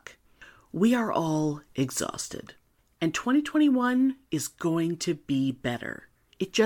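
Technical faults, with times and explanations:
No technical faults found.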